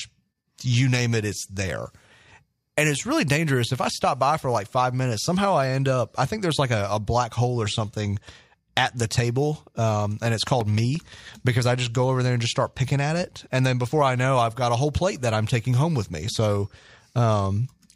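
Speech, with CD scratch ticks between 10.09 and 11.30 s, after "something at the table" and before "because I just go": eight regular clicks, about seven per second, each only a few milliseconds. A disc blemish is defeating error correction once per revolution, leaving thin vertical spectrogram lines and tiny waveform notches.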